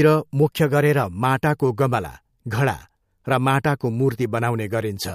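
From 0.42 to 1.03 s the speech suddenly runs about 6.4% fast and sits roughly a semitone sharp, then snaps back just before "माटाको गमला घडा". That's a drift correction step, likely clock-matching software jumping the playback rate to rebalance its buffer.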